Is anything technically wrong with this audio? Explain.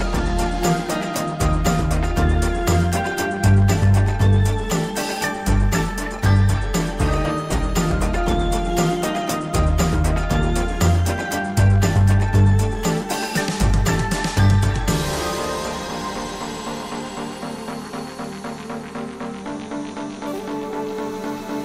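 No, nothing stood out as technically wrong when listening to this audio.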